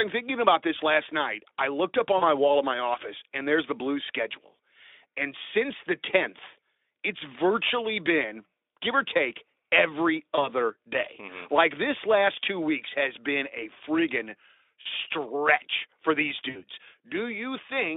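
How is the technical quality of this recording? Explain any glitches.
The recording is telephone-band speech over Speex, limited to about 300 Hz to 3.6 kHz with light codec colouring. It has four concealed packet-loss glitches and one click.

VoIP packet loss concealed by the speech codec occurs four times:
2.17–2.23 s, between "night I looked up" and "my wall of my"
10.35–10.49 s, after "give or take every"
14.81–14.86 s
16.49–16.64 s

About 40, 20, 40 and 60 ms of audio were lost. The decoder extrapolated its last pitch and filter at falling gain, so each gap becomes a fading buzzy or noisy smear that stays weak briefly afterwards. This smear sets it apart from a sharp click.

Dropped samples at 16.29 s produce a single sharp click, likely a fraction of a millisecond of missing samples. It is instantaneous, with no buzz or lingering weakness.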